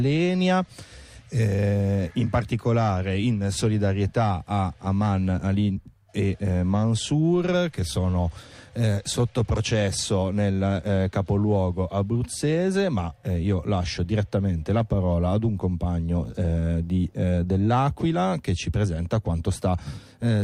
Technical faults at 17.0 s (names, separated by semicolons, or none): none